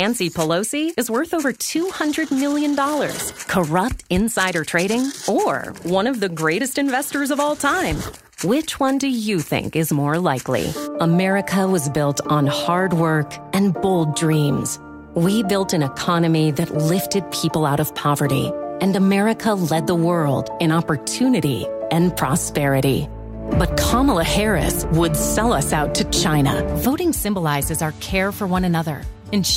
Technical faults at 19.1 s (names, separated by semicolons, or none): clock slip clicks